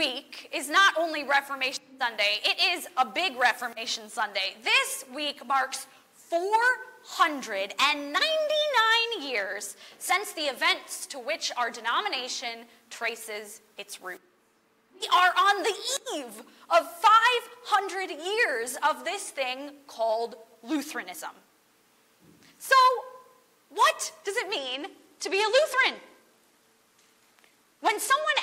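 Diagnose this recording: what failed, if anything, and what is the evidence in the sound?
The codec stage failed: a Bluetooth SBC bit pool drop from 24.58 s to the end. Treble dulls and gritty noise rises, fitting a bit pool cut from 28 to 13, near 102 kbps. On a spectrogram the top sub-bands go dark above a speckled, coarsely quantised floor.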